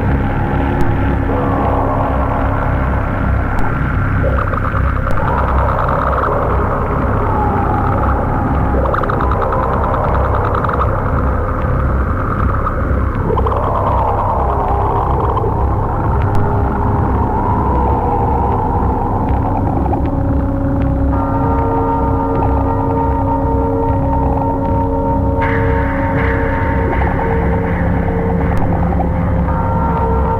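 At 0.81, 3.59, 5.11, 16.35 and 28.58 s the waveform's zero line jumps suddenly, a DC step of about -8 dBFS for the first four and about -10 dBFS for the last. Each offset then decays away as a 2 Hz high-pass lets it bleed back to zero, so every step is heard as a low thump. Unlike a dropout or a digital click, the sound carries on unchanged through each one.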